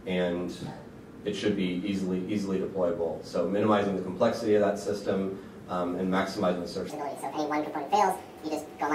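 From 6.90 s to the end, the section at the wrong speed plays 1.65 times too fast. Pitch rises about ten semitones along with it. The sound turns high and hurried at once. Most likely this part was fitted to the wrong clock.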